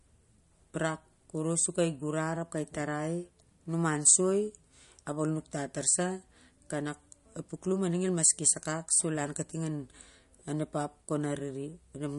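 Throughout this speech recording there is a watery, swirling quality, with sibilants smeared and chirpy, and nothing above about 11.1 kHz. The likely cause is heavy MP3 compression, which fits a low bitrate around 48 kbps: the encoder cuts the treble and lets weak frequency lines flicker between frames.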